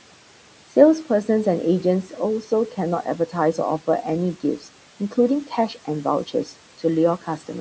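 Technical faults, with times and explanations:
4.43 to 4.67 s, speech cut by the noise suppressor: within this quarter-second stretch, roughly a tenth of a second of speech is pulled down by as much as about 9 dB, so the sound turns faint and swallowed. The suppressor misjudged those low-level speech components as background and attenuated them along with the room noise. This is a partial dip that follows the speech's own energy, not a hard silence or an abrupt gap, which is what separates it from a dropout or lost packet.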